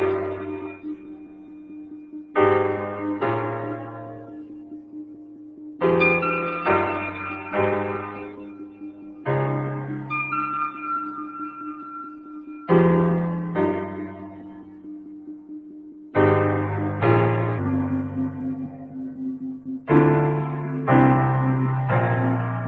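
The audio has passed through a call chain whose noise suppressor, a noise suppressor built for speech, was applied to music or general sound and left on for the whole clip. It treats held tones, ambience and reverb tails as noise, so the level swings by around 15 dB as attacks pass and sustained material is pulled down. The result pumps and thins. On a waveform the envelope breathes irregularly, and on a spectrogram the tails fade early, leaving clean onsets with dark gaps behind them.

Three stretches show sound cut by the noise suppressor especially hard: 0.61 to 2.35 s, 4.09 to 5.81 s and 14.04 to 16.15 s. In each, steady or decaying sound sinks by up to about 9 dB for roughly one and a half to two seconds, while sharp transients survive. The waveform shows the body of the sound collapsing between peaks, and the spectrogram shows the horizontal energy bands fading out across each span.

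From the start to 17.58 s, a section at the wrong speed runs 1.16 times too fast, raising pitch by about three semitones and hurrying the timing. The likely cause is playback or editing against a mismatched clock. A spectrogram shows the harmonics sitting higher and spaced wider until 17.58 s, where they drop back down and events spread out in time.

Nothing appears above 8 kHz, consistent with the wideband call codec band limit.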